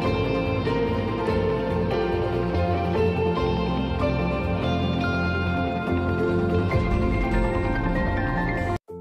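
No technical faults can be heard anywhere in the audio, and the signal stays steady and intact throughout.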